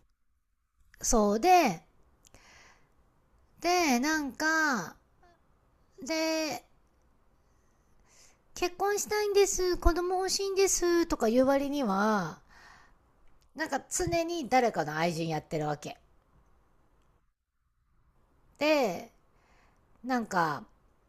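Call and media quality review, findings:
Nothing stood out on listening to this speech recording.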